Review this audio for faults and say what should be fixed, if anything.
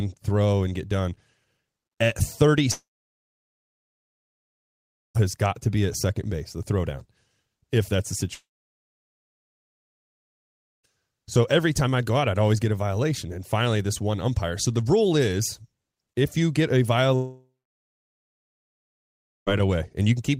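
A likely long network dropout, where the stream stopped delivering packets for about 2.3 to 2.5 seconds at a time, happens three times in this speech: 2.71 to 5.17 s (ending just before "has got to be"), 8.35 to 10.86 s (after "if that's the") and 17.16 to 19.49 s (after "if you get a"). Each time the receiver briefly stretches the last sound into a fading buzz, then drops to near-silence until the audio resumes with the intervening stretch lost. A more stable network link, or a larger jitter buffer with packet retransmission, would prevent these gaps.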